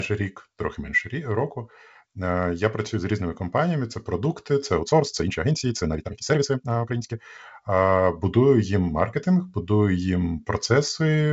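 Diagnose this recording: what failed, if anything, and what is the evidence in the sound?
From 4.77 to 7.21 s, after "компаніями це продукти це", speech turns rushed at 1.79 times speed with steady pitch. This is likely a software time-stretched section.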